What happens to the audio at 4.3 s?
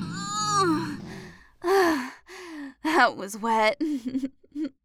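Nothing goes wrong at 4.3 s; the audio plays through that moment intact, with no dropout, click or other fault to be heard.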